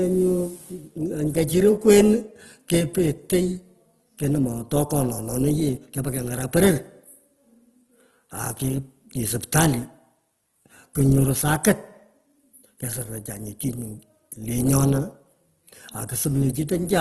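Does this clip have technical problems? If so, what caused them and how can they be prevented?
Yes. The whole clip sounds rough and grainy, and nothing is left above about 12.3 kHz, which points to a likely cause of Opus compression at a low bitrate, around 16 kbps in its music mode. Encoding speech at a higher bitrate would prevent it.

There's also a pre-echo at 13.6 s, where a short hiss smears about 10 ms ahead of a sharp onset because the codec's noise spreads through the quiet part of the block. More bits, or shorter transform blocks around attacks, would keep it away.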